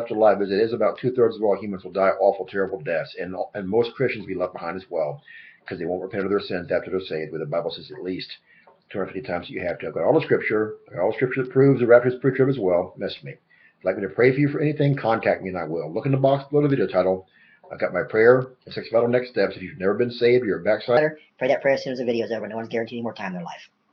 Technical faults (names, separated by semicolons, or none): section at the wrong speed